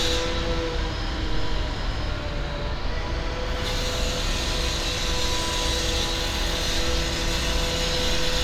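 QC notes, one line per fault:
No technical fault can be heard anywhere in this audio; the signal stays continuous and stable throughout.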